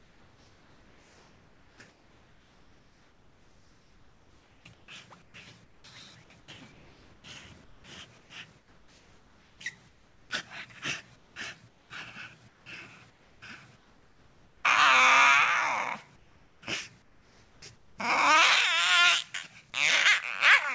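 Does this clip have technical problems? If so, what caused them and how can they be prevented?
Yes. Comfort noise replaces the background at 0.0–5.84, 6.4–10.3, 11.16–11.9, 12.48–14.64 and 16.16–17.98 s. Real ambience gives way to steady, featureless hiss, likely because discontinuous transmission stopped sending during quiet input and the receiver synthesised filler. To prevent it, disable discontinuous transmission (DTX) on the sending side so the actual background is always transmitted.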